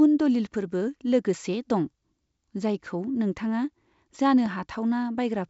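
Right after "नोंथाङा जानो", from 4.46 to 4.48 s, there's a single loud pop sitting roughly 10 dB above the speech, which carries on underneath it. It's likely a sudden voltage pulse, from a plug, switch or static, that got into the signal path.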